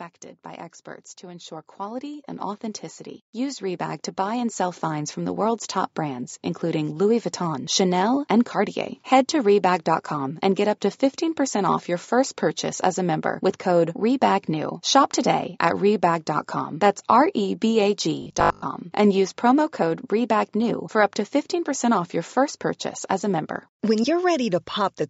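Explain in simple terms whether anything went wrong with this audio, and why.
Automatic gain rising runs from 0.44 to 6.31 s. The volume control built into the recording chain decided the sound was too quiet and slowly turned itself up over those six seconds. The speech and the background grow louder together, so the start of the clip sounds distant and then creeps closer. The rise is fairly large, enough that the change is easy to notice.

A robotic sound from repeated short buffers appears briefly, from 18.22 to 18.64 s. The speech turns into a stiff, metallic buzz with a low fixed hum, about 50 Hz, that still roughly follows the talking. The likely cause is fresh audio arriving too slowly: the software kept replaying the last tiny slice, which fits a 20 ms chunk, and most of the real sound in that stretch was lost.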